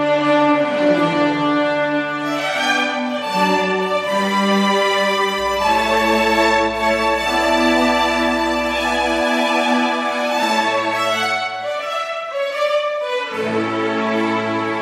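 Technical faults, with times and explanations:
5.37–9.25 s mains hum: a steady low 60 Hz drone with some low harmonics, roughly 20 dB under the signal, from power-line coupling through a ground loop or nearby transformer.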